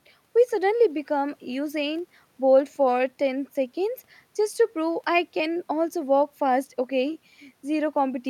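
Listening to the speech recording, nothing technical stood out at any point.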